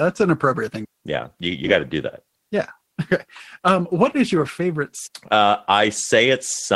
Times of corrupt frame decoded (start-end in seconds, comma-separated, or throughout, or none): none